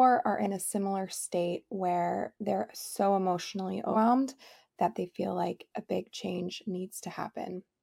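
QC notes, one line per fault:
3.93–3.96 s, compressed frames skipped. The speech jumps forward. About a fifth of a second of audio is missing, which points to roughly five whole frames being dropped. The compressed stream uses frames of about 46.4 ms. The decoder either could not find them in the file or rejected them as damaged. Playback resumes further on.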